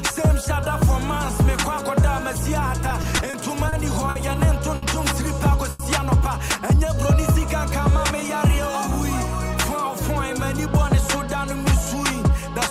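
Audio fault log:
2.89–3.74 s, repeated stalls (stutter): late packets ran the jitter buffer dry five times, each gap bridged by stretching the last sound, 90 ms in all, longest 30 ms. The sound drags unevenly. A spectrogram shows brief smeared, flattened bands; the waveform shows small repeated stretches.
4.10–4.17 s, 4.75–4.84 s, 5.70–5.81 s, short stall from a late packet: each time a packet came late, the receiver held the last sound for 50, 70 and 90 ms, then resumed without loss. It sounds like a held sound with a slight buzz or dip. A spectrogram shows horizontally stretched bands; the waveform shows a repeated, slightly dipping stretch.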